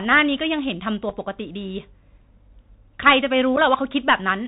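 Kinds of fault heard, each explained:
Bluetooth CVSD headset codec: narrowband sound with nothing above 4 kHz, scratchy s sounds and granular hiss, from one-bit delta modulation at 64 kHz with adaptive steps.
Unconcealed Bluetooth headset packet loss: abrupt tiny holes near 1.1 s and 3.56 s, about 11 ms and 7.5 ms missing, where a few packets were replaced by silence or an idle pattern.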